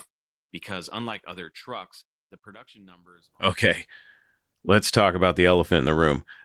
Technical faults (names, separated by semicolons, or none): none